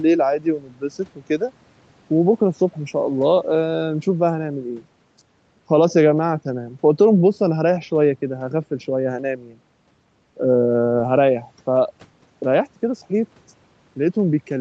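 Nothing goes wrong anywhere in this speech, which comes through an ordinary call chain with the top end stopping around 8 kHz, just what you'd expect from call microphone processing and a wideband call codec.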